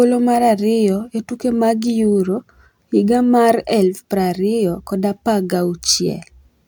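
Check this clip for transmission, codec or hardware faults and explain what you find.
Nothing here suggests a transmission, codec or hardware problem; the speech comes through steady and intact the whole way, so there's nothing to flag.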